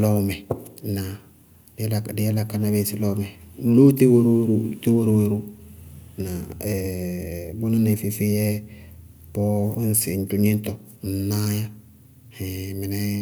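No audible faults are present anywhere in the speech recording.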